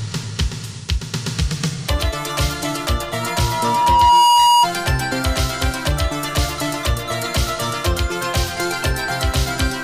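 From 3.22 s to 4.67 s there is loudspeaker feedback squeal. A microphone picks up its own loudspeaker, and the loop gain exceeds one at 957 Hz. That single tone swells over about a second. It peaks about 10 dB above the sound.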